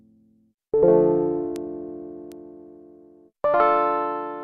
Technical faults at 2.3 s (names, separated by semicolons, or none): bit error spike